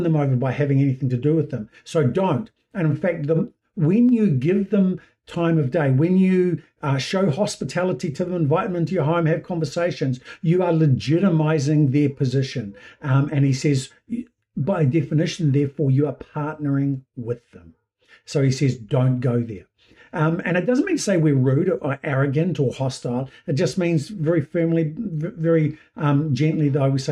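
At 4.09 s there is a single sharp click, the kind of discontinuity produced by dropped samples. A tiny fraction of a millisecond of the stream is likely missing, so the waveform steps abruptly from one value to a later one instead of continuing smoothly. The gap is far too short to remove any audible material; what remains is the step itself, heard as one brief tick and visible as a thin vertical line spanning the spectrum.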